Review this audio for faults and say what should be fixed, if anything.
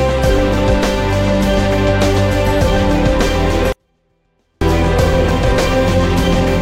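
From 3.72 to 4.61 s, a 24-bit alignment error: 24-bit samples sitting in the low bytes of 32-bit words are read as full 32-bit integers, dropping level about 48 dB while staying clean. Declare the sample container format explicitly at every interface and left-justify or convert 24-bit data before treating it as 32-bit.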